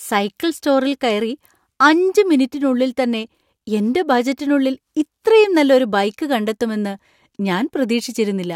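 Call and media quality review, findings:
Clock slip clicks, 0.30–8.28 s. Likely two devices on free-running clocks about 20 ppm apart with no sync, so a single sample is dropped or repeated each time the drift reaches one sample. Faint regular ticks, about one per second, around seven in total across the speech.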